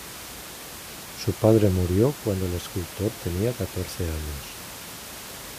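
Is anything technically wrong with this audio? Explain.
No, nothing technically wrong stood out on listening to this speech recording.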